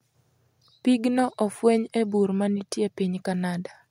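Nothing technically wrong turns up anywhere in this short bit of speech.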